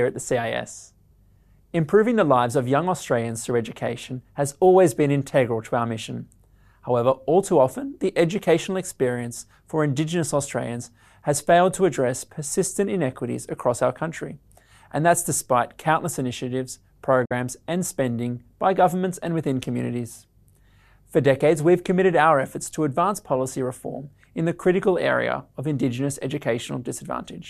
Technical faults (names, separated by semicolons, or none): digital broadcast dropout